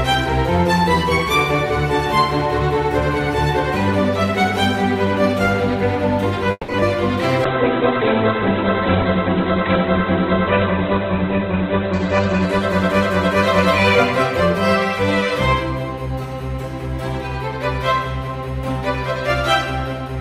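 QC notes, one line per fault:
6.51–6.82 s, repeated stalls (stutter): four short hold-ups in quick succession, the longest about 170 ms, during which the last sound is stretched out and, on the longer hold, fades. Packets were arriving late, so the jitter buffer kept draining and the receiver had to extend what it last played. About two-thirds of this span is filler, roughly 200 ms of it, with only about 30 ms actually lost, so the passage drags and stutters.
7.45–15.48 s, call bitrate drop: the audio turns rough and watery, and the top end collapses from full range to a ceiling near 4 kHz, giving a muffled, band-limited quality. The bandwidth estimate fell and the encoder coarsened its coding. The sound points to a drop from around 48 kbps to about 11 kbps, with the worst stretch lasting about 4.3 s before the bitrate climbs back and the highs return.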